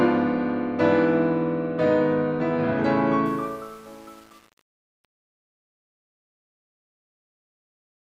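From 3.26 s to the end at 8.14 s, the music has truncation distortion on a fade. The fade-out from 3.26 s is requantised without dither, with steps coarse enough to fit a 7-bit stage. The tail turns gritty.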